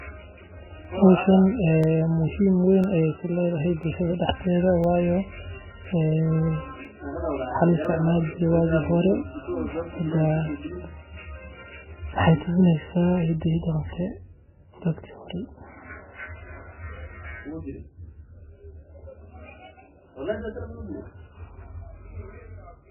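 Right from the start the whole speech clip sounds starved: nothing comes through above 3 kHz, and what's left is heavily smeared and watery. That's most likely MP3 compression at a very low bitrate, something like 8 kbps, with the encoder chopping the treble and dropping weak detail.

From about 0.85 s to 7.85 s you also get periodic USB or driver dropouts: tiny ticks roughly every 1.0 s, each a gap of about a millisecond filled with silence, where something is briefly blocking the audio path on a steady schedule.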